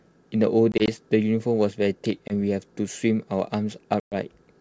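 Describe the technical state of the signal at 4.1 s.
At 4.1 s you're right inside a packet-loss gap on the ADPCM call, running from about 4.00 to 4.15 s, with roughly 120 ms of audio gone, which sounds like a handful of packets dropping together. The missing stretch is filled with silence, so you get a hard-edged hole. When the speech comes back, the decoder's predictor and step size no longer match the sender's, so it returns with a bit of distortion. The G.722 wideband sound around the gap stays clear.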